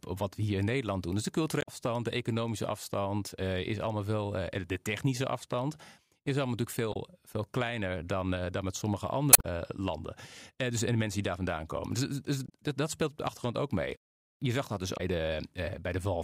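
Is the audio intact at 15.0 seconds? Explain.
No. From 14.94 to 15.00 s there is damaged data in the compressed stream: the decoder misreads corrupted frames, loses sync and hunts for the next valid header, giving a brief chirp or squawk in the speech. A spectrogram shows a short, garbled broadband smear; the waveform shows an abrupt discontinuity.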